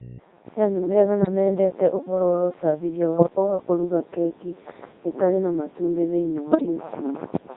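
The speech has been squeezed through a Codec 2 vocoder, which fits its 3.2 kbit/s mode. Only pitch, voicing, energy and spectral shape survive, rebuilt from sine waves, so the whole clip sounds heavily robotic and buzzy, with the natural waveform gone.

Bit errors on digital voice radio corrupt the vocoder's frame parameters three times. From 1.22 to 1.28 s, just before "mendete ũhoro wa úcabithia", a brief warbling bleep fits about two damaged frames at a few percent error rate. From 3.18 to 3.30 s, between "mendete ũhoro wa úcabithia" and "wa kũruga keki", heavier errors jolt pitch and level into garbled gibberish. From 6.52 to 6.66 s, after "itarĩ na matumbĩ thĩinĩ", lighter but longer corruption makes the tone colour waver and chirp.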